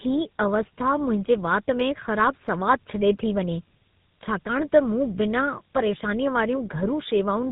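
From start to end the speech carries tandem speech coding: the chain sounds like two low-rate speech codecs in a row, likely a mobile coder decoded, passed over an ordinary telephone link, then coded again in something resembling GSM full rate. Nothing survives above 3.8 kHz, yet unlike plain band-limiting the voice is also rough, smeared and warbly, because the second coder re-models errors the first already made, degrading it beyond what any single codec would.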